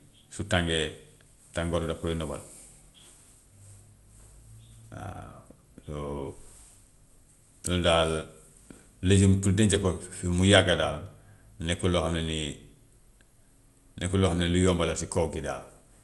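Generation loss runs through the whole recording: the speech has a swirly, hollow quality and smeared consonant onsets, with nothing above about 11.9 kHz. The likely cause is repeated lossy encoding, around four passes, through a codec whose character points to MP2 at a rate that fits 96 kbit/s. Each decode and re-encode lands on a shifted frame grid, so fresh quantisation noise piles up, blurring attacks beyond what one pass would.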